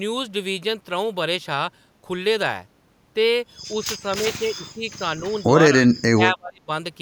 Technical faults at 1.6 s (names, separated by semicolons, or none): none